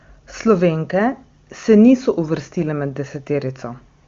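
Speech carried over AMR wideband (HD Voice) at 23.85 kbit/s, and nothing is technically wrong with it.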